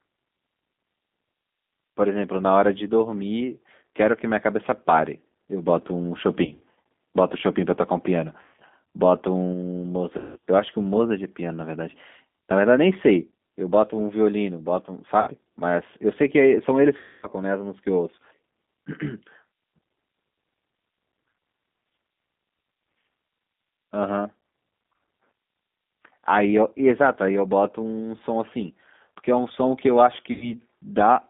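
The whole clip carries G.729 codec damage, and it is plainly audible. The sound is confined to roughly 200 Hz to 3.6 kHz, with nothing above. The speech is rebuilt from a filter, a pitch predictor and a few pulses per frame. That leaves it rough and slightly synthetic. The character points to an 8 kbit/s G.729A stream.

VoIP packet loss concealed by the speech codec breaks in six times. These fall at 6.45 to 6.61 s, 8.42 to 8.54 s, 10.18 to 10.37 s, 15.21 to 15.31 s, 16.97 to 17.27 s and 30.32 to 30.55 s. In each, the decoder repeats its last pitch and filter at falling gain. The sound smears into a buzzy tone or a coloured noise that fades. The worst gap, near 17 s, loses about 260 ms. Near 6.5 s the losses are scattered, in runs up to 60 ms.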